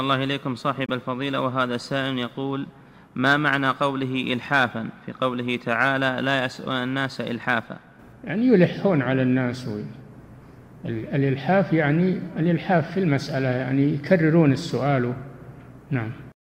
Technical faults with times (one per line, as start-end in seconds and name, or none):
0.86-0.90 Bluetooth dropout